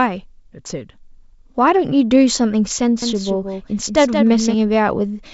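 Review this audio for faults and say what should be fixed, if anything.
A doubled audio track runs from 3.02 to 4.54 s. A full-band copy trails about 200 ms behind, about 5 dB quieter, with no decay. It cuts in and out abruptly, likely from a second capture path. Route each source through one path only.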